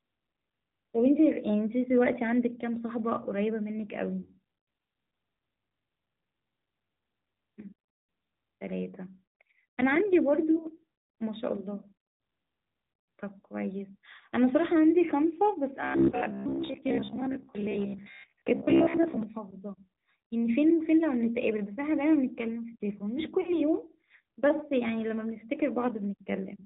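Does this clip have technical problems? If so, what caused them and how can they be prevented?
Yes, three kinds of fault stand out.

AMR narrowband mobile codec: the whole speech clip has a buzzy, synthetic edge and nothing above 4 kHz, with the damage plainly audible. The character fits AMR-NB at a mid-rate mode around 10 kbps, where a few pulses drive a vocal-tract model. To avoid it, record or route the call over a wideband or higher-bitrate path.

Lost AMR speech frames: short dropouts at 4.22–4.36 s, 16.10–16.16 s and 23.42–23.58 s. The decoder papers over each gap by reusing the last good pitch and tract settings at falling gain. That gives a brief smear, about 40 ms at the first and last points and 20 ms in the middle. To prevent it, improve radio coverage or add error protection and redundancy on the link.

Robotic sound from repeated short buffers: from 15.81 to 19.23 s the speech turns into a rigid metallic buzz at about 67 Hz that only loosely tracks the words. 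That pitch matches a repeated chunk of roughly 15 ms. The likely cause is audio arriving too seldom, so the software replays the last buffer while most of the real audio, around seven tenths, is skipped. Giving the audio thread priority and a larger jitter buffer should stop it.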